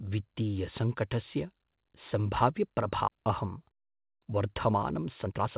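At 3.08 s the speech makes a skip ahead: about a second of audio was discarded, and playback jumps straight to later material with no filler or silence. On a waveform the envelope changes abruptly at one point, and a spectrogram shows an unbroken seam where unrelated formant patterns meet.

From 3.18 s to 5.57 s a jitter buffer speed-up follows, as the receiver drains the backlog. It repeatedly removes pitch-period-sized pieces, about 0.4 s in total, so the speech runs at 116% speed but keeps its pitch and sounds hurried. A spectrogram shows compressed syllables and harmonics at unchanged spacing, all cut off at 4 kHz by the G.711 A-law call path.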